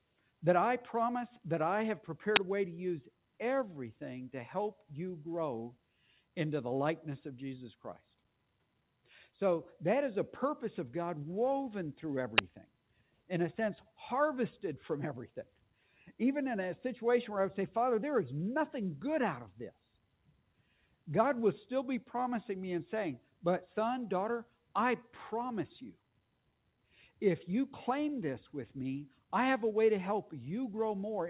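At 2.36 s and again at 12.38 s a 10 ms uninitialised buffer plays: leftover memory read as samples gives a loud crack. The sound is cut by the noise suppressor at 3.11–6.21 s, 7.8–9.08 s, 12.66–16.12 s, 19.71–21.07 s, 23.2–27.21 s and 29.1–29.32 s. Each time, sustained and decaying parts sink by about 12 to 13 dB while sudden onsets pass, unlike an overall gain change. Throughout, nothing reaches above 4 kHz, which fits the G.711 A-law call codec at 64 kbps.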